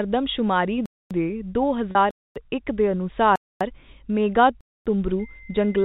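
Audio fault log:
0.86–1.11 s, 2.11–2.36 s, 3.36–3.61 s and 4.61–4.86 s, gap between chunks: the speech stops dead for 250 ms four times. Each gap follows about 1 s of sound, so the holes recur every 1.25 s, which suggests audio delivered in 1 s chunks with each one started late. Nothing is lost, only pushed later. The waveform shows flat silent stretches with vertical edges, and the spectrogram shows blank full-height columns, evenly spaced.
1.91–1.95 s, packet loss with pitch repetition: for 40 ms the speech turns briefly held and buzzy. The receiver bridged the dropout by looping the last pitch period, and the length fits two lost 20 ms packets. Because the gap is so short, the repeat never fades to silence. The spectrogram shows harmonics frozen flat in a narrow strip, and the waveform shows identical cycles repeating before the speech resumes.
5.19 s to the end, switching supply whistle: a thin high whistle near 2 kHz enters and drifts between 2.02 and 2.11 kHz, sitting about 25 dB below the speech. 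It is the kind of tone a power supply makes when its switching falls into the audible range as the load shifts. Because it is well under 4 kHz, it passes through the G.711 telephone coding. On a spectrogram it is a slightly wavering horizontal line, and in the waveform it is a low, steady ripple riding on the signal.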